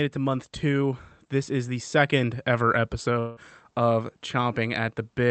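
At 3.19 s the speech breaks off and the last sound is stretched into a fading buzz. It carries on for roughly 170 ms rather than dropping to silence. At 3.40 s the speech resumes, but about 180 ms of it is gone. Nothing fills that gap with real sound. This is likely a long network dropout, where packets stopped arriving and the receiver concealed the hole. Through the call path, top frequencies stop near 8 kHz.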